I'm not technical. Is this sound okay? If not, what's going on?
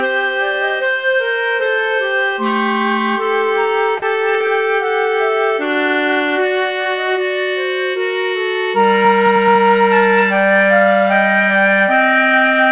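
No, not quite. At about 3.98 s there's a short stall from a late packet. A piece of the audio arrived late, so the receiving end held the last bit of sound for about 41 ms, until the piece turned up, then carried on from the same spot. You'd hear a brief stretched moment, with a slight buzz or dip. Unlike a dropped packet, nothing is cut out. The sound just lags a little. The call line's dull, phone-like tone, with nothing above 4 kHz, is normal for this kind of call.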